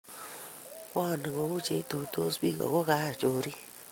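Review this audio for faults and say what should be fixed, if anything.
There's a short concealed packet loss at about 2.58 to 2.61 s in this speech. Around 20 ms of audio didn't reach the decoder in time, so the receiver covered the gap by extending the preceding sound for roughly 16 ms and then crossfaded back into the real signal. You hear it as a quick smear or wobble. The fix is upstream: give the jitter buffer a bit more headroom, or add forward error correction, so late or dropped packets get recovered rather than patched over.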